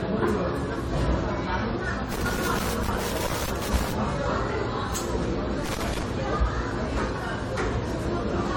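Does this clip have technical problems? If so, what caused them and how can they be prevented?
Yes. Throughout, the sound is swirly, smeared and hollow, with blurred attacks, more than one encode would produce. This is likely generation loss from repeated re-encoding, fitting AAC-LC near 64 kbit/s several times over. Encode once from the original source.

Irregular bursts of crackle and scratching run from 2.12 to 3.92 s and from 5.66 to 6.03 s. Unlike evenly spaced digital clicks, these are ragged loose connector crackle, a worn contact chopping the signal as it moves. Clean or replace the connector and secure the cable.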